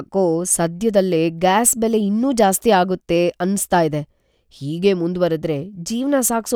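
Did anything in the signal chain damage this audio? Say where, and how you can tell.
No, nothing in the signal chain has audibly damaged this speech recording; the signal stays continuous and intact at every stage, with no stage leaving an audible mark on it.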